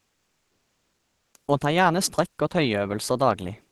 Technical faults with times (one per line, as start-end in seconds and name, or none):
0.00-1.33 comfort noise in place of the background